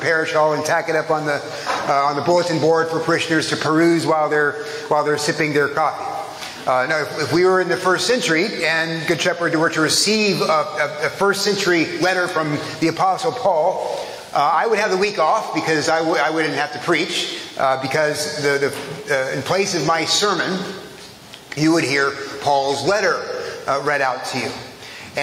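Throughout the clip, the gain swings by around 15 dB, leaving loud and soft parts squashed close in level. This gain pumping likely comes from input gain set far too high, with a fast limiter clamping down on every peak.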